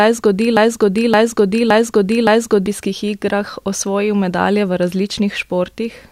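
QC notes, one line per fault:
0.57–2.66 s, broken-record loop: a 0.57 s chunk of the speech plays four times back to back, then normal audio picks up at "igrah osvojil medalje v". The player or stream likely stalled and kept resending its last fragment, so whatever belonged in that stretch is gone.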